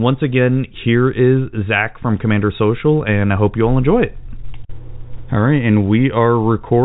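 Nothing goes wrong anywhere in this speech, which comes through as ordinary G.711 telephone coding with its usual ceiling of about 3.8 kHz.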